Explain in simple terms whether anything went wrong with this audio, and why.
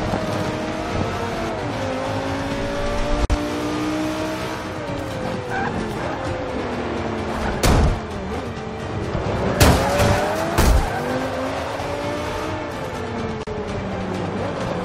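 Two short dropouts break up the sound: one at 3.25 s lasting about 51 ms, and another at 13.43 s lasting about 38 ms. Each is a gap at a join of encoded pieces. The audio was encoded in separate chunks and then stuck together without trimming. Each chunk brought along a sliver of silence at its start and padding at its end, so a brief hole with smeared edges opens up before the sound picks up right where it left off.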